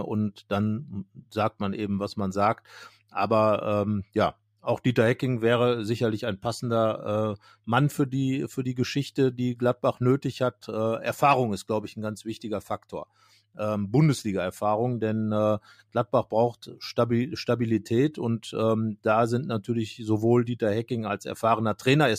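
Listening to the speech in this clip, nothing stood out as a technical problem at any point.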